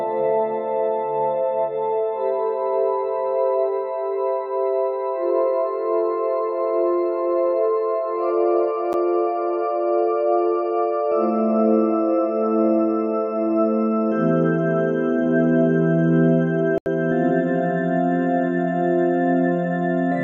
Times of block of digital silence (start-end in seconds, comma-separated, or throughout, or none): 8.93, 16.78-16.86